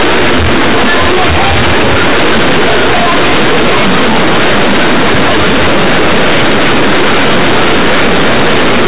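From start to finish the speech is harsh, buzzy and far too loud, with quiet passages blown up to nearly the level of loud ones and a heavy hiss filling the pauses. This is companded audio read as linear: the mu-law bytes, which fit a telephone-band stream topping out near 4 kHz, are played as plain 8-bit samples without expansion, so every sign change throws the waveform across half its range.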